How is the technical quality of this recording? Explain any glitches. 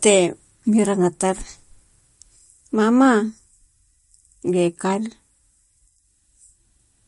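The quality is limited by plainly audible compression damage throughout the speech. Throughout the clip, nothing is heard above 11.2 kHz. The sound is watery and swirly, with smeared attacks. This is likely MP3 compression, at a rate pointing to about 46 kbps. Short of bits, the encoder drops weak frequency lines that flicker between frames, and it cuts the treble.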